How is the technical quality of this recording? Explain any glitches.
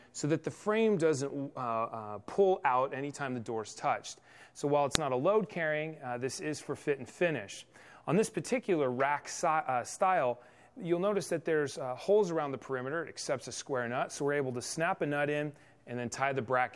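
There is one glitch. At 4.95 s, a file header played as audio: header bytes from a joined WAV piece were read as samples, producing a sharp, loud click.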